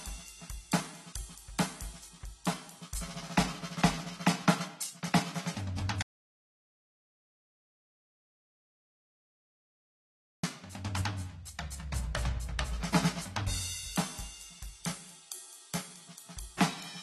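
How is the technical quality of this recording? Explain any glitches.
The music has two clear problems: persistent low-bitrate compression damage and one long gap of total silence.

Throughout, the sound is dull and smeared, with nothing above 12.1 kHz. This is likely AAC compression at a bitrate near 27 kbps. Unlike simple low-pass filtering, the codec damage is plainly audible beyond the missing treble.

From 6.02 to 10.43 s, an audio dropout to silence lasts about 4.4 s, likely because input was lost while recording continued. It is dead silence with no room tone, so it is not a pause or a fade.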